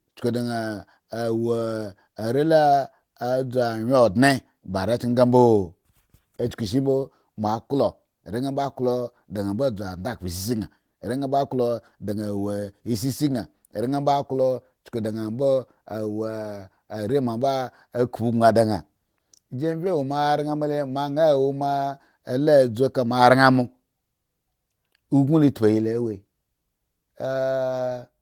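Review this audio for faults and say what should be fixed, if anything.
No faults can be heard in this speech recording. Nothing here needs to be fixed.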